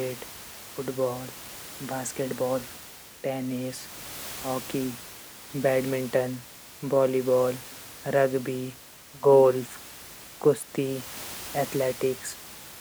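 No technical faults are audible.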